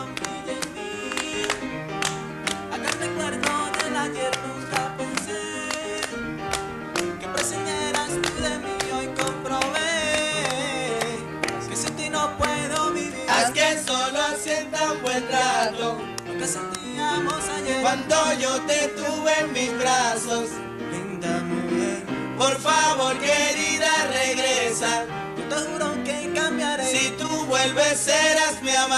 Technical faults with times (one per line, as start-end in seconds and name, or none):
none